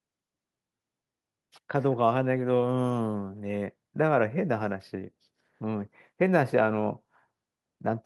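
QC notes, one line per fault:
No faults to note in this speech clip, so there are no QC lines to list.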